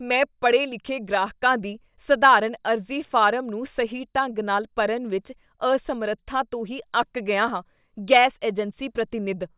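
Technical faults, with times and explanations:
No technical faults detected in the speech.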